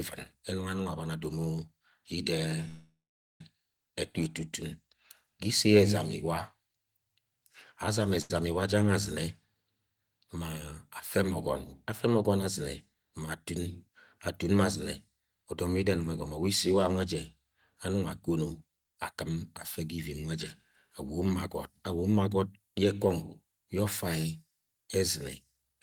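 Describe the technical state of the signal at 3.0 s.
At 3.0 s a call audio freeze runs from 2.68 to 3.41 s, likely from a drained jitter buffer. The last sound is held as a fading buzz, then about 0.47 s of silence. Nothing is lost; the speech resumes 0.72 s late. A spectrogram shows a frozen, smeared band thinning into a blank strip.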